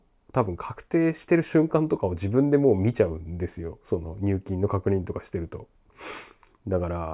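No faults detected anywhere in the speech recording.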